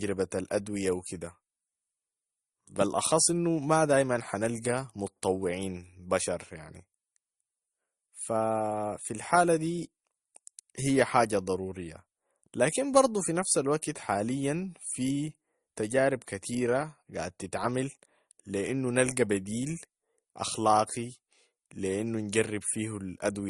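Throughout the speech, nothing is heard above 12 kHz, and the top end sounds dull. Two kinds of coding damage are layered together. The likely cause is transcoding between lossy codecs: an MP3 pass, which fits a rate near 40 kbit/s, then an Opus encode near 48 kbit/s. The second codec spent its bits re-encoding the first one's artefacts and added its own. The lower cut-off stayed in place.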